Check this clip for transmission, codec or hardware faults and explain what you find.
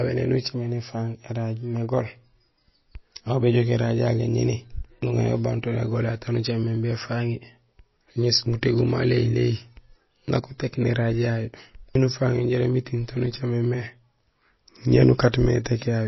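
One codec fault runs throughout the speech. Nothing sounds above 5.8 kHz, and a plainly audible watery swirl persists. This is likely MP3 compression at a bitrate near 24 kbps, where weak frequency lines flicker between frames and the treble is cut. A simple low-pass filter would dull the top without the swirl.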